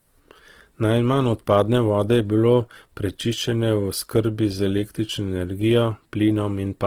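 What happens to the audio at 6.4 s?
At 6.4 s the speech carries the same grainy, rough texture heard across the whole clip, most likely Opus compression running in its music (CELT) mode at a low rate, around 16 kbps. Short of bits, the encoder keeps each band's energy but fills detail with folded or noise-like content, so the sound turns coarse. A spectrogram shows bands filled with smeared, noisy texture instead of clean harmonics, with content still reaching about 20.3 kHz.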